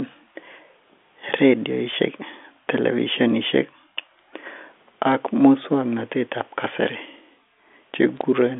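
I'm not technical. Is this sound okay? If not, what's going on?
No. There's a brief glitch at 5.12 s and another brief one from 8.17 to 8.21 s. These are bit errors on a digital phone line: a few digits in the telephone signal got flipped, and each one spoils a single instant of sound; flips of the most important digits produce a click over the speech.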